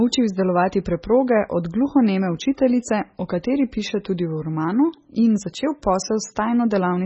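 Speech runs through the whole clip with heavy MP3 compression damage, likely from encoding at a very low bitrate, which fits a rate around 16 kbps. Nothing is present above 8 kHz, so the treble is cut flat and s sounds lose their edge. Weak frequency lines drop in and out from frame to frame, giving a watery, swirling texture with metallic chirps on sibilants, and consonant attacks sound smeared rather than crisp.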